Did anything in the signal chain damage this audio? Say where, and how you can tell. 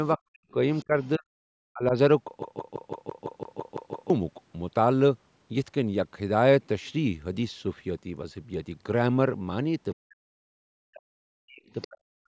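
Yes. Call processing: from 0.17 to 1.27 s, 1.70 to 1.93 s and 9.95 to 12.29 s the talker dips by roughly 40 dB. That's speech suppressed in double talk, likely the echo canceller ducking both sides.

Also call processing: a faint second voice sits underneath from 0.73 to 1.09 s and 11.70 to 11.88 s, about 30 and 20 dB down. That's the other side's voice leaking through, likely residual loudspeaker echo.

Storage/playback: from 2.43 to 4.10 s a 168 ms slice repeats ten times with small mutes at each jump, a CD stuck on one turn, the laser skipping back each revolution.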